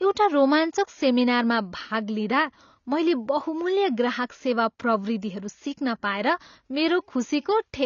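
AAC compression damage runs through the whole speech recording: nothing sounds above 7 kHz, leaving it dull, with a smeared, warbling texture on sibilants. The cause is likely an AAC-LC encoder starved of bits, consistent with roughly 24 kbps, lowering its cut-off and thinning the spectrum.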